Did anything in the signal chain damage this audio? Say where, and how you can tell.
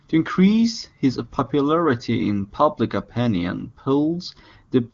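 No, the speech has gone through an AMR wideband (HD Voice) codec at its highest rate, 23.85 kbit/s, which leaves nothing above about 7.3 kHz and at most faint coding traces, and nowhere along the chain does the signal show any damage.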